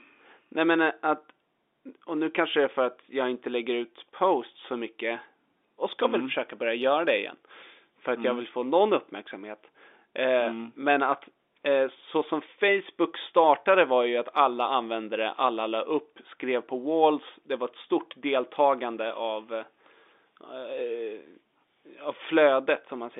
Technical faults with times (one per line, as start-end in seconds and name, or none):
none